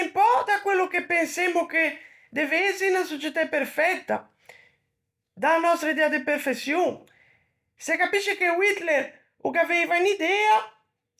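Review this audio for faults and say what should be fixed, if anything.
Nothing here needs fixing; no faults can be heard.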